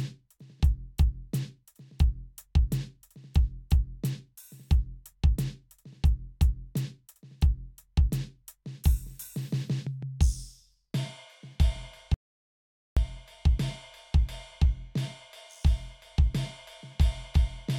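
A music clip with an audio dropout to silence from 12.14 to 12.97 s, losing about 0.82 s: a flat waveform gap and blank spectrogram column, likely from the input link briefly failing.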